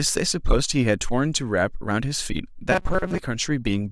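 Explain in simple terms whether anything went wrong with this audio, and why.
From 2.72 to 3.19 s the speech becomes a stiff, metallic buzz near 188 Hz. This is robotic sound from repeated short buffers: fresh audio likely arrived too slowly, so a tiny slice kept replaying over most of that stretch.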